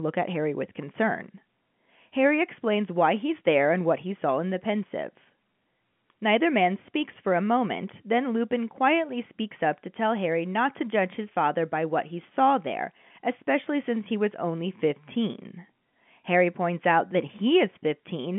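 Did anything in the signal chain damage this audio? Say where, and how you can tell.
No, the signal chain did no damage: the speech sits in a telephone band of roughly 150 Hz to 3.4 kHz with nothing above 3.8 kHz, as expected of a working G.711 A-law line (which fits 64 kbps coding), and any coding trace on it is at most faint.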